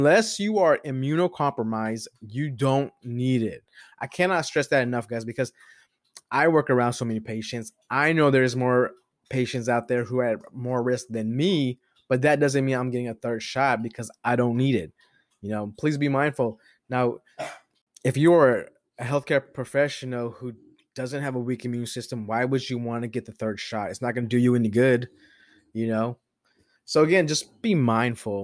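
No technical faults can be heard anywhere in the recording. There is nothing to point to at any moment of the speech.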